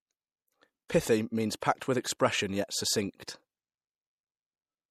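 From start to finish the speech carries a watery, swirling quality. The top end sounds dulled, as if the treble stops abruptly. The s sounds turn metallic and chirpy. Word onsets are smeared rather than crisp. This is likely MP3 compression at a low bitrate, which fits a 64 kbps encode. With too few bits, the encoder drops the highest frequencies. It also discards weaker detail, which flickers in and out between frames and causes the swirl.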